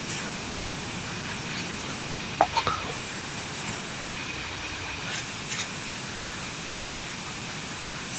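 The sender's voice detector likely judged parts of this speech recording to be background and stopped transmitting, so the receiver filled the gaps with comfort noise. The result is sound dropped by the voice detector: the speech gives way to a flat hiss or near silence at 0.49 s, 2.11 s, 4.03 s, 6.19 s, 6.67 s and 7.81 s, for 0.24, 0.06, 0.12, 0.12, 0.36 and 0.12 s respectively. Each time, the speech returns once the detector triggers again.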